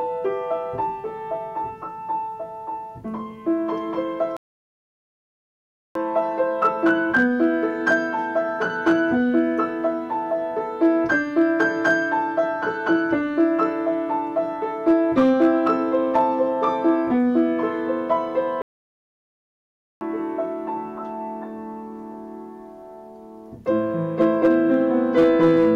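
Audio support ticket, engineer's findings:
Hard clipping throughout. Peaks are driven about 5 dB past full scale and cut flat. Only a small fraction of samples hit the ceiling. Heard as brief crackle on loud peaks. The flat tops add high harmonics. Some stage received more signal than it could pass.

Playback stall at 4.37–5.95 s (1.59 s) and 18.62–20.01 s (1.39 s). Sound cuts to silence mid-flow, then resumes. Likely cause: player buffer underrun or a blocked audio thread starving the output.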